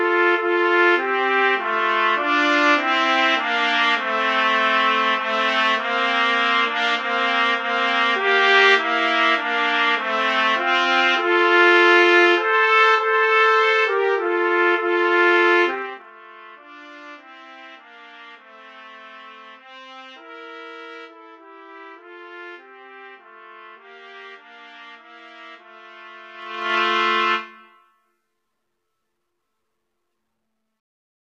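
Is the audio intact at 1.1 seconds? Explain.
Yes, the audio is intact at 1.1 seconds, with nothing wrong to be heard at that moment.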